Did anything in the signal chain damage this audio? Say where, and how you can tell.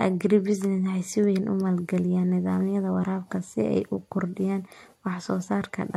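No, no damage can be heard.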